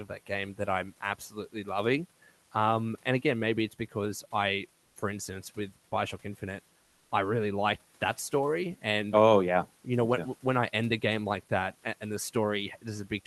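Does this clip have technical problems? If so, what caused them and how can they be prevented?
Yes. Comfort noise in place of the background from 4.85 to 4.95 s, after "maybe it's because I": steady, featureless noise about 3 dB quieter, likely Opus DTX. Disabling DTX on the sender prevents it.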